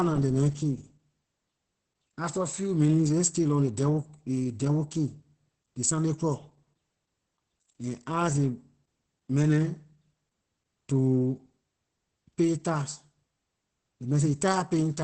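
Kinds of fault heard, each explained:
Opus voice compression: speech is cut off above about 8.6 kHz and sounds hoarse and slightly robotic, unlike a plain low-pass filter, which fits SILK at roughly 10 kbps.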